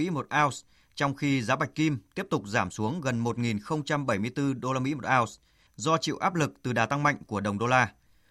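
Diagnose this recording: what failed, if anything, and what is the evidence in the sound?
Nothing failed; no fault can be heard anywhere.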